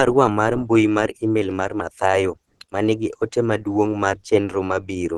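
A speech clip with plainly audible Opus compression throughout: the voice sounds hoarse, rough and muffled, likely from the codec's hybrid speech mode at a low rate near 16 kbps. A spectrogram shows a flat ceiling at 13.9 kHz with grainy, noise-filled bands below it.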